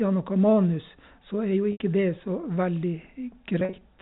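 Packet loss with pitch repetition occurs at 1.72 to 1.8 s (80 ms) and again at 3.6 to 3.81 s, where 120 ms is scattered in runs up to 40 ms. The receiver bridges each gap by repeating the last pitch period, fading it out over about 50 ms, so the telephone-band speech briefly holds a buzzy, frozen tone in the short runs, while the 80 ms gap fades into silence before the speech cross-fades back.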